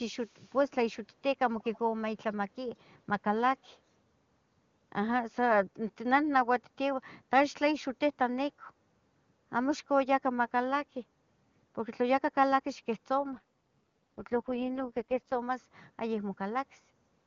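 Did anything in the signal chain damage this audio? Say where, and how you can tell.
Yes. In call processing, faint echo leak trails the speech by about 0.19 s at 0.19–0.58, 1.61–1.79 and 3.63–3.68 s, likely from a far-end speakerphone's echo canceller leaving residue.

At the network and codec stage, an AMR rate drop from 13.19 to 15.39 s makes the speech rough and synthetic without any gap, which fits a fall to roughly 6.6 kbit/s.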